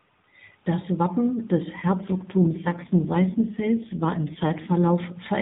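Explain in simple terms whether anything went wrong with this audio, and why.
From 1.82 s to 4.92 s there is an AMR rate drop. The phone codec, which is narrowband, switches to far fewer bits. The voice turns rougher and more synthetic. Nothing cuts out and the tone stays equally thin. The quality recovers afterwards.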